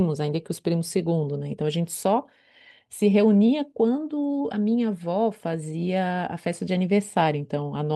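The sender's clock runs roughly 2 percent slow against the receiver's, so there is clock drift between sender and receiver throughout this speech clip. The jitter buffer keeps running short, leaving the receiver starved of fresh audio and forcing it to fill gaps.

From 0.03 s to 7.86 s the receiver answers with repeated timing corrections, duplicating short slices of audio so playback runs at 98 percent speed and adds about a fifth of a second overall. The repeats land unevenly and are heard as faint stutters and a slightly dragging, unsteady pace, carried over the Opus call path with its top end limited near 12 kHz.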